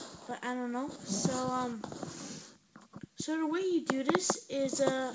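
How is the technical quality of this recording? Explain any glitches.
The technical quality holds up, with no glitches to explain, though the audio carries nothing above 8 kHz after its trip through the call path.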